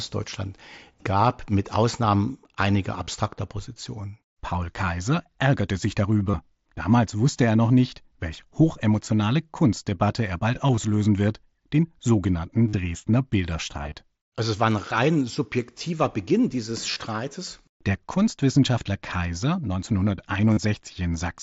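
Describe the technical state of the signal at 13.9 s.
A brief buzzy flutter roughens the sound from 13.83 to 13.94 s. This is concealed Bluetooth headset packet loss: about 45 ms of audio went missing in short gaps, none longer than 15 ms, across those 105 ms, and each gap was patched by repeating a recent stretch of waveform.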